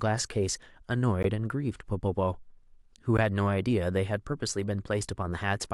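At 1.23 s a 16 ms block of digital silence drops into the speech, samples zeroed, so the sound cuts out and back with no fade.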